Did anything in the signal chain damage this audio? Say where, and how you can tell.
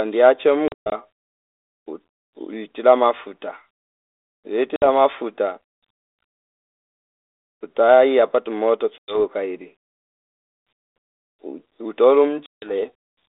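Yes, the network did it: packet loss on an ADPCM call. Hard-edged silent holes land at 0.68, 4.76, 8.98 and 12.46 s. Each return sounds slightly distorted briefly while the decoder's predictor and step size drift from the sender's, then resettle.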